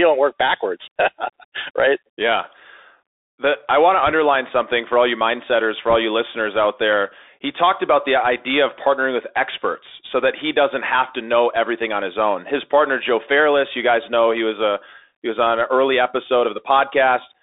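Bluetooth CVSD headset codec, throughout the speech: the band runs only from about 300 Hz to 3.7 kHz, consistent with a 64 kbps one-bit delta coder whose adaptive step can't keep up with loud high content, so sibilants turn scratchy and granular hiss sits underneath.

Bit errors on a Bluetooth voice link, at 4.07 to 4.12 s and again at 5.90 to 5.96 s: flipped bits, under one percent in the first burst and about one percent in the second, each nudge the delta coder slightly and fade quickly, giving a brief rushing crackle rather than loud clicks.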